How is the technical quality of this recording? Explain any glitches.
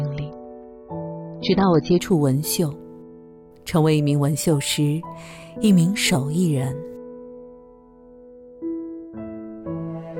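The first two seconds are degraded, after which the quality jumps up cleanly. From 0.0 to 2.0 s there is an adaptive stream starting at a low bitrate. The player began on a cheap rendition, likely around 24 kbit/s AAC, to start quickly, then switched to a richer one, which fits roughly 96 kbit/s, once it had gauged the connection. Until the switch, nothing sounds above 6.3 kHz, so the audio is dull and carries stronger codec smearing. At 2.0 s it brightens abruptly, with no gap. On a spectrogram the energy stops at a flat ceiling near 6.3 kHz and then fills the upper band from 2.0 s onward, while the waveform runs continuously through the change.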